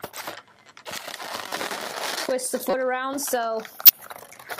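Short bursts of misplaced noise, each under 40 ms, cut in at 1.49 to 1.52 s, 2.70 to 2.74 s and 3.86 to 3.89 s, growing louder each time. This is a corrupt frame decoded: damaged compressed data was played anyway, scattering energy across wrong frequencies.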